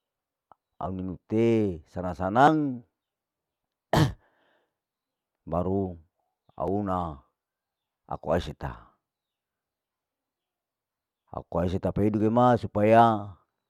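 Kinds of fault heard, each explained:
Dropped buffer (overrun): four times the speech skips ahead with no gap, first just after "au ninu te sanang". Likely the software didn't collect its samples before they were overwritten, losing roughly 20 ms each time, twice that near 13 s.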